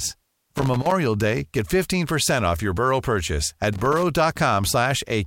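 Speech, with two bursts of loose connector crackle, from 0.56 to 0.91 s and again from 3.73 to 4.03 s. Each is an irregular scratchy rattle where a worn or dirty contact keeps making and breaking as it shifts, chopping the signal.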